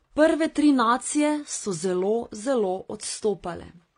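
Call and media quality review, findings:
Transcoding between lossy codecs, throughout the speech. Band-limited, nothing above about 10.1 kHz. Artefacts of different codecs heard together. Likely cause: chained lossy encodes. The sound fits a path from 32 kbit/s AAC through WMA into 32 kbit/s HE-AAC, each stage re-coding the previous artefacts. Unlike a single low-bitrate encode, mismatched artefact signatures are heard together rather than one consistent texture.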